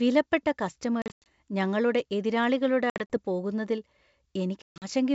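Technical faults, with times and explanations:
1.02–1.27 s, 2.90–3.17 s, 4.63–4.85 s, packet loss on an ADPCM call: scattered hard-edged holes (about 180, 120 and 180 ms lost) near "ഞങ്ങളുടെ എതിരാളികളുടെ". The decoder's predictor and step size drift from the sender's, so speech returns briefly distorted.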